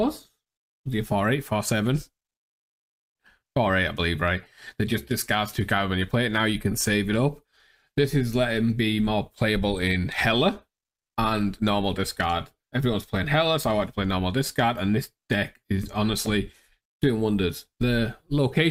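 No technical fault can be heard anywhere in the audio.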